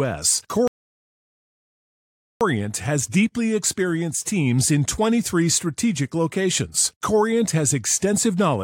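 At 0.68 s the speech drops into a rebuffering stall: the player ran dry on downloaded audio and sat silent until 2.41 s, then carried on exactly where it stopped. Nothing goes missing, but about 1.73 s of dead air gets added.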